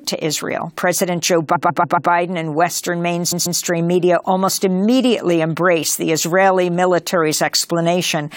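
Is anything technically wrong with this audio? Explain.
Yes, there are repeated frames. From 1.54 to 2.10 s, and again at 3.31 to 3.59 s just before "media almost immediately embraced", a 139 ms chunk of compressed frames plays again, four extra times and then twice, stuttering and adding about 0.84 s.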